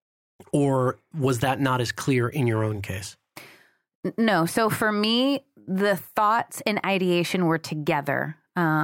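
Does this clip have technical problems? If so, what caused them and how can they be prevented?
No, no technical faults are audible.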